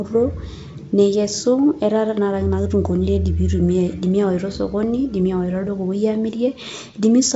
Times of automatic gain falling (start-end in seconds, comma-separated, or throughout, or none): none